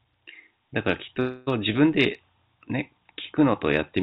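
At 1.2 s the speech breaks off and a buzzy, smeared continuation of the last sound stretches on until about 1.49 s, getting weaker without ever dropping to true silence. That points to a long network dropout as the likely cause: around a quarter of a second of audio never arrived, the receiver filled the hole by extending what it last had, and when the stream picks up again that missing chunk is simply gone. All of it sits inside the narrowband call sound, with nothing above 4 kHz.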